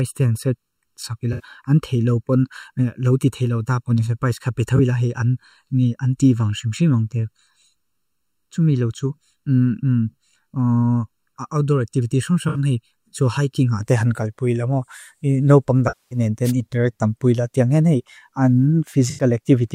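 From the start to about 13.8 s the speech sounds hollow and phasey. This is channel delay (comb filtering): one channel lags the other by roughly 0.7 ms, and summing them to mono cancels shared content at evenly spaced notches, the first around 700 Hz.

Brief smeared, noisy, phasey patches occur at 1.33–1.44 s (64 ms), 4.76–4.80 s (21.3 ms), 12.48–12.58 s (64 ms) and 19.10–19.24 s (85.3 ms). At 15.88–16.19 s a longer gap of 234.7 ms decays toward silence and fades back in. This is AAC frame loss with concealment. The decoder rebuilt the missing audio from the last good spectrum and faded it as the gap lengthened.

At 16.44–16.52 s, shortly after that long dropout, a short swish of static crosses the voice. This is a wireless microphone noise hit. The FM radio signal briefly faded, and receiver noise rose up over the audio.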